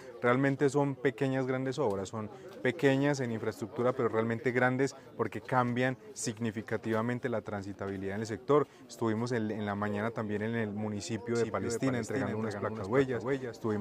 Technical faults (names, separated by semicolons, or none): doubled audio track